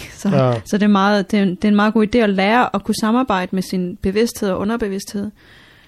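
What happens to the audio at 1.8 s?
The speech at 1.8 s carries the same plainly audible coding damage heard throughout the clip, likely MP3 compression at a rate consistent with about 64 kbps. With so few bits, the encoder caps the treble and drops weak frequency lines that flicker in and out between frames. The result is a dull top end with a watery, swirling texture, metallic chirping on s sounds, and consonant onsets that smear.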